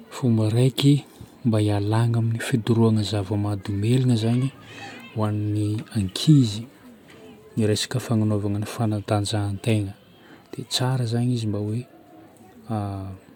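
Nothing in the recorded speech points to a technical fault at any point in the clip.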